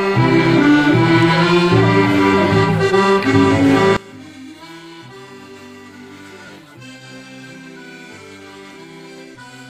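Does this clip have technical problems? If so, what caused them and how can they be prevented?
Yes. From 3.97 s to the end, the sound drops by about 24 dB and turns faint. The likely cause is one channel inverted, so the shared content cancels when the stereo pair is summed to mono. Checking polarity on each channel before any mono fold-down prevents it.

At 6.46 to 6.50 s, a brief concealed dropout of about 30 ms replaces the sound. This comes from lost LE Audio frames: the LC3 decoder filled the gap by repeating the last spectrum with scrambled phase, which fits about four dropped frames. A stronger Bluetooth link with less interference and a shorter range prevents it.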